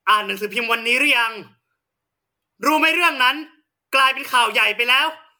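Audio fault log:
Throughout, generation loss: the speech has a swirly, smeared, hollow quality beyond what a single MP3 pass at 128 kbit/s would give, with blurred attacks, likely from about five rounds of MP3 decoding and re-encoding, each pass adding fresh quantisation noise and spectral holes on a shifted frame grid.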